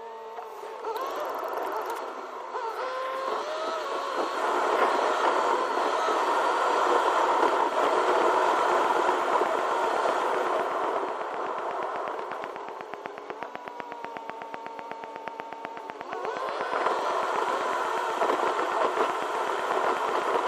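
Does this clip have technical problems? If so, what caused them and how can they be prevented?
Yes. A train of clicks runs from 7.48 s to 20.35 s: around a hundred near-identical pulses at a steady 8.1 per second, standing well above the sound. The likely cause is electrical interference or a faulty connection or power supply. Shielding cables and moving nearby equipment away prevents it.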